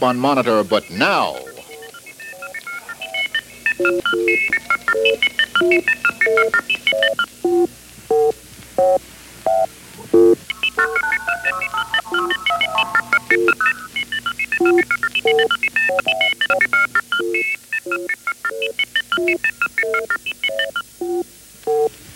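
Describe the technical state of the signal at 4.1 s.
At 4.1 s the chunks are out of order, from 3.50 to 4.50 s. A 500 ms chunk plays one chunk late, so the sound jumbles across three hard joins.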